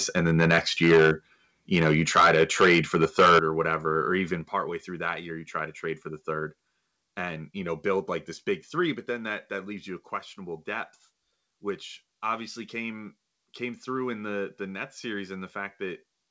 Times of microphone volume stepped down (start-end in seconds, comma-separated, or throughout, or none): 0.94, 3.39, 4.41